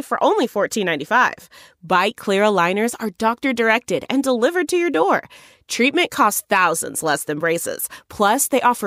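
A corrupt frame decoded at 0.44 s in this speech clip puts a brief burst at the wrong frequencies, peaking around -15 dBFS, consistent with a few damaged compressed frames played anyway.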